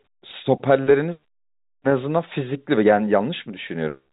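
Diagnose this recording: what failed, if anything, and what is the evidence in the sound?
Nothing failed; no fault is audible anywhere in this recording.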